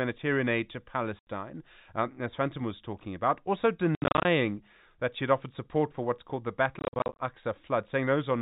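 Packet loss filled with silence cuts the speech three times. At 1.19 s, an 80 ms hole opens. From 3.95 to 4.25 s and from 6.79 to 7.19 s, scattered gaps up to 70 ms long chop the sound. Each hole has hard edges. The lengths fit 10 ms packets.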